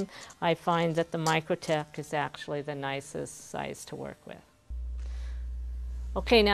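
Mains hum from 4.70 s to the end: a steady 60 Hz tone nearly as loud as the audio, leaking in through a ground loop or nearby transformer.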